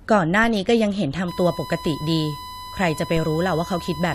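At 0.44 s a DC step occurs. The waveform's zero line suddenly jumps and then decays away through a high-pass around 5 Hz, giving a brief low thump beneath the speech. From 1.28 s to the end, USB whine leaks in as current drawn in the bus's 1 ms frames couples through power or ground, laying a steady fixed-pitch 1 kHz tone under the speech, about 15 dB quieter than it. At 3.17 s a second DC step shifts the baseline again and decays the same way, producing another dull thump.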